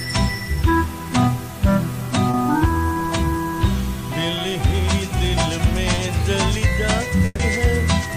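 Two short concealed packet losses occur at 2.31 to 2.35 s and at 5.95 to 5.99 s. In each, about 20 ms of audio failed to arrive at the decoder in time. The receiver patched the hole by extending the preceding sound, then cross-faded back into the real signal, leaving a brief smear or wobble where 20 ms of material is simply absent.

A burst of packet loss follows at 7.25 to 7.41 s. Roughly 140 ms went missing in a run, which fits several consecutive packets arriving too late or not at all. Concealment carried the last sound forward and attenuated it across the gap, so it decays into a held buzz or fading hiss, with about 10 ms of near silence before playback resumes. The 140 ms of audio between those points never reappears.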